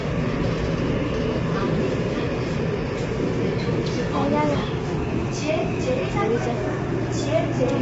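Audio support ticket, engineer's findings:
Likely low-delay AAC compression (AAC-ELD), throughout, at a low bitrate around 24 kbps; coarse quantization turns fine detail into grainy, rough texture, and nothing is left above 7.7 kHz.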